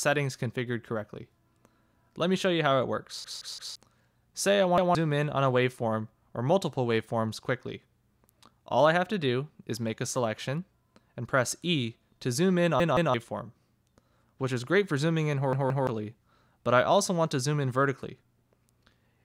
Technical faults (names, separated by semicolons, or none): repeated buffer